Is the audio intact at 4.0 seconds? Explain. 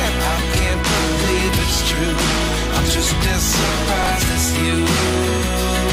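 No. From 4.03 to 4.07 s there is a case of chunks out of order. One 10 ms chunk arrives three chunks late and plays after the ones meant to follow it. Nothing is lost, but the sequence is scrambled. Three hard joins give a brief jumbled moment.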